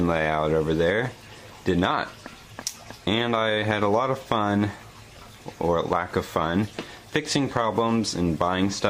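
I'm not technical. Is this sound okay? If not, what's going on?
Yes, this one's fine: nothing in it sounds broken or glitchy, so there's nothing to worry about.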